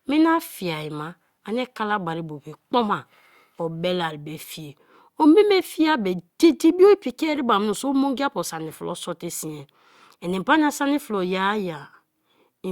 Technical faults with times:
none

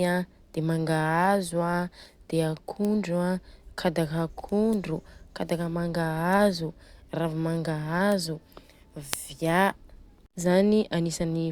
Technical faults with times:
2.85 bit error spike
8.12 bit error spike
9.13 bit error spike

